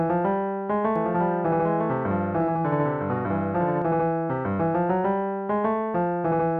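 A likely second capture path or misaligned edit mixes in a doubled audio track from 0.96 to 3.82 s: a dry copy about 5 dB quieter trails roughly one second behind, starting and stopping abruptly.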